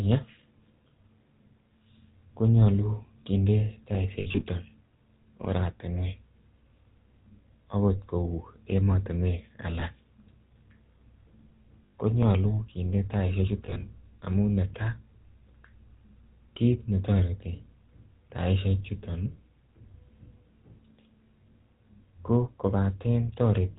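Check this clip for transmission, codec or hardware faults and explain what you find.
There are two faults: a GSM full-rate codec throughout, and lost GSM frames at four points.

The GSM full-rate codec shapes regularly spaced pulses through a vocal-tract model, with nothing above 4 kHz. The speech sounds buzzy and gravelly, consistent with 13 kbps.

Lost GSM frames occur at 4.20–4.45 s, 9.80–9.83 s, 11.86–11.94 s and 13.66–13.83 s. Each gap repeats the last good frame, giving a brief rough, metallic ring.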